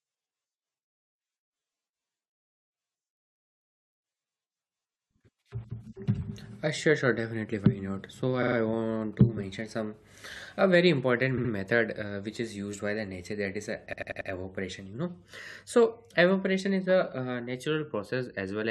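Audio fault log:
8.42–8.56 s, repeated frames: a block of about 46 ms is played three extra times, which fits two compressed frames resent, giving a short stutter and adding 139 ms.
11.37–11.51 s, repeated frames: a 70 ms block, consistent with three frames, repeats twice more, adding 139 ms.
13.92–14.29 s, repeated frames: a 93 ms block, consistent with four frames, plays four extra times, the longest stutter, adding 372 ms.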